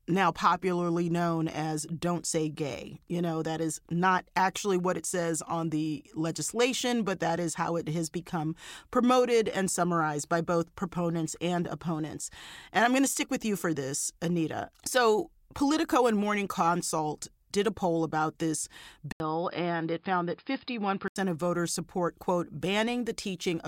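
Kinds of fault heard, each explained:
Input switched to a poorer device: after an 80 ms gap following "a poll about this", speech loses everything above 5.1 kHz and gains a faint new noise floor at unchanged loudness, likely another microphone; unlike steady filtering, it reverses before "of voters support quote".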